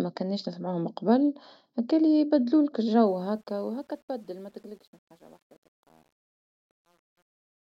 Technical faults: truncation distortion on a fade

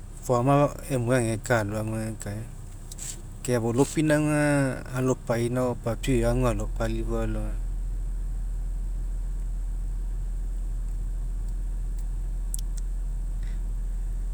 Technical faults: none

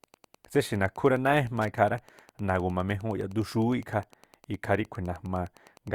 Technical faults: Wi-Fi interference

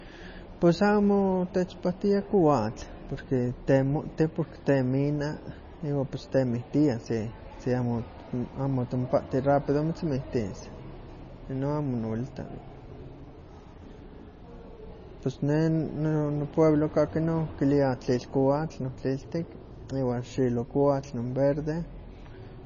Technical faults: MP3 compression

